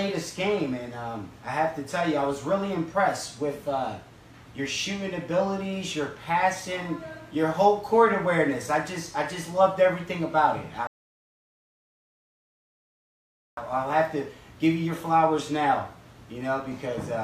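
At 10.87 s there's a rebuffering stall: the player ran dry, went silent for about 2.7 s, then picked up exactly where it stopped at 13.57 s.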